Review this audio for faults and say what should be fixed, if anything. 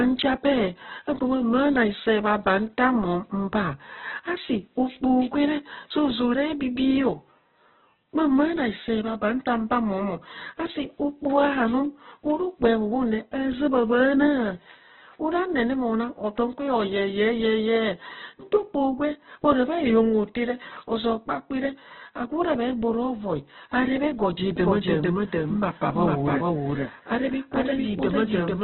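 Throughout the speech the sound is muffled, grainy and rough, with nothing above about 4.1 kHz, so it is narrowband. This is likely heavy Opus compression in its music mode, which fits a very low bitrate of around 8 kbps. Prevent it by encoding at a higher Opus bitrate with full bandwidth allowed.

From 24.57 s, just after "vai areb ego ja", to the end, every sound repeats about half a second later at roughly equal loudness, with no decay or room colour. This doubled audio track is a second full copy mixed in out of step. Prevent it by making sure only one capture path or one copy of the recording reaches the mix.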